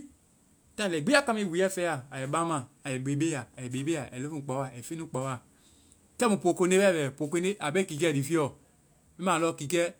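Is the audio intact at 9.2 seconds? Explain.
Yes, the audio is intact at 9.2 s, with no fault there.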